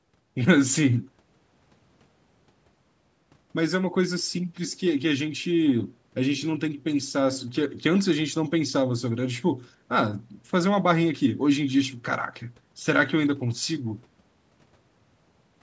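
Nothing stood out on listening to the speech, and the lack of content above 8 kHz, along with the trimmed lowest bass, is what normal call microphone processing leaves behind.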